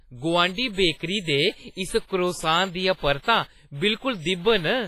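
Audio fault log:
throughout, WMA compression: the audio was likely squeezed through a Windows Media Audio transform encoder at a low bitrate, which fits roughly 24 kbps. Quantisation noise is smeared across long blocks, so the speech rings and sounds washy, with a hiss that swells and fades along with the signal. Weaker spectral detail has been zeroed out, leaving a heavily processed texture, and nothing remains above 15.5 kHz.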